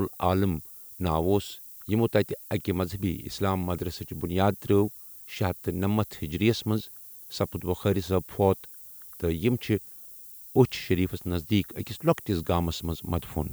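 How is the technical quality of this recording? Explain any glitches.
Technical quality is poor: low bit depth with noise shaping runs throughout the speech. Eight-bit rounding error, pushed upward in frequency, gives a thin hiss roughly 20 dB below the speech, rising steeply toward the top of the band. On a spectrogram it shows as a noise floor climbing toward the top.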